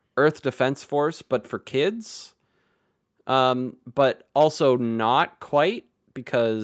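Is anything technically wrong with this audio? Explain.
No, nothing is wrong: the speech carries no content above 8 kHz, consistent with a normal call microphone chain and codec path, and no faults are audible.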